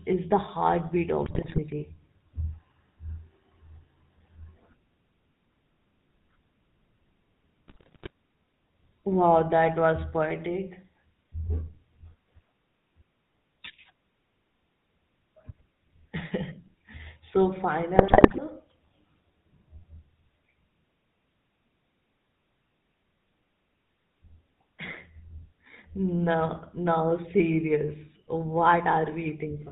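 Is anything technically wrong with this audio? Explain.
Yes. For the whole clip the speech has passed through the GSM full-rate codec. The codec models the vocal tract and drives it with a sparse, regularly spaced pulse excitation, at a rate that fits 13 kbps GSM. Nothing above 4 kHz survives, so the speech sounds band-limited and muffled at the top. The coarse excitation gives it a plainly audible buzzy, gravelly roughness.

Three bursts of GSM bit errors occur: 1.26 to 1.60 s, just after "is the heartbeat", 7.68 to 8.10 s, and 17.96 to 18.39 s. Each burst points to a weak link corrupting a few percent of the bits across sixteen to twenty-one decoder frames. When flipped bits hit the filter, pitch or gain values, the decoder rebuilds frames with a distorted spectrum or a wrong level. Each burst lasts under half a second, and the speech breaks into squawks, pops and gargling.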